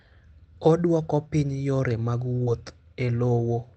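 At 2.43 to 2.50 s, right after "piny yore mag", the speech briefly smears and wobbles. This is short concealed packet loss: about 40 ms of audio arrived too late, and the receiver bridged the gap by extending the preceding sound before blending back. Around it, the call path's Opus coding holds the audio to an 8 kHz upper limit, which fits a low call bitrate.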